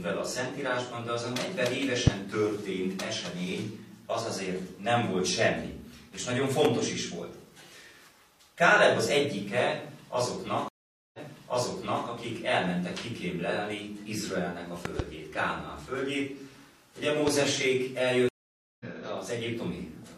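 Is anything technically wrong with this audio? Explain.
Yes. There are two kinds of fault: loud pops and stream reconnects.

Loud pops occur at 2.07–2.10 s, 6.65–6.67 s, 14.85–15.02 s (a double pop) and 17.27–17.30 s. A sudden voltage pulse, likely from a plug, switch, static or driver glitch, is added to the signal. Each is a sharp pop about 15 to 20 dB above the sound, which carries on underneath.

Stream reconnects occur at 10.68–12.06 s and 18.29–18.86 s. The connection dropped, the player fell silent, reconnected and restarted decoding mid-stream. The first leaves 450 ms of silence and resumes 0.93 s earlier, repeating material. The second leaves 512 ms of silence and resumes roughly 0.4 s later, skipping ahead.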